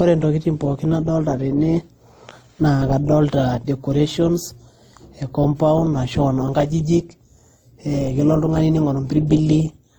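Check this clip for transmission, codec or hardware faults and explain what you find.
The speech carries one fault, present throughout: transcoding between lossy codecs. Two layers of coding artefacts are heard together. The sound points to a WMA encode near 64 kbit/s that was likely re-encoded as Opus at 32 kbit/s. The later codec spends its bits on the earlier artefacts and adds its own. Nothing remains above 20.2 kHz.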